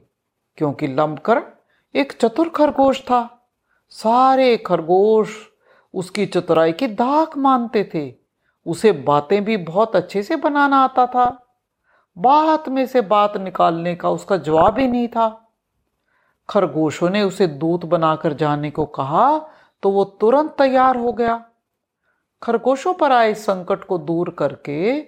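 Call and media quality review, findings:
DAB burbling over the speech at 2.68–3.11, 11.25–11.53, 14.46–14.93, 18.76–18.85 and 20.76–21.34 s. Short noise blips in single sub-bands. Weak reception; bit errors under a percent slip past error correction, corrupting MP2 sub-band levels per frame.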